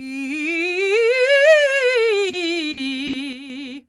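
Short concealed packet loss hits the music at 2.29 to 2.36 s. About 40 ms of audio never arrived in time, so the receiver patched the hole by extending the preceding sound, carrying its pitch forward where it was tonal and substituting shaped noise where it was not, before crossfading back into real audio. The result is a brief smear or wobble.

A lost packet rebuilt from error correction sits inside that stretch, at 2.33 to 2.35 s. That 20 ms frame was recovered from the low-bitrate duplicate that Opus carries in the following packet, so there is no gap. The rebuilt frame is coarser and noisier than its neighbours.

A burst of packet loss follows at 2.71 to 2.80 s, and another at 3.07 to 3.16 s, each removing about 60 ms. Both times the receiver kept the last sound going while fading it down, so tonal material turns into a held buzz and the rest into a decaying hiss. Playback then picks up further along, and the music that fell in between is simply gone.

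A sudden gain jump comes at 3.33 to 3.50 s. Over that span the level drops by about 6 dB, and the music and its background fall together in a single step rather than a fade. The likely cause is a digital gain setting applied instantly, from one sample to the next, with no ramp to smooth it.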